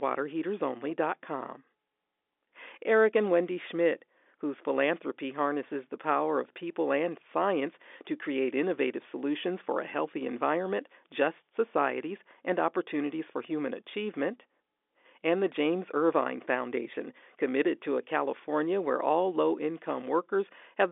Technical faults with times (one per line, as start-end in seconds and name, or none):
none